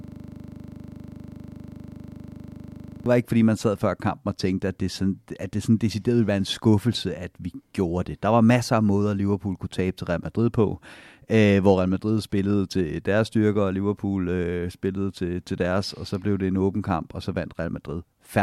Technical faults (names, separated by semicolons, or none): system hang loop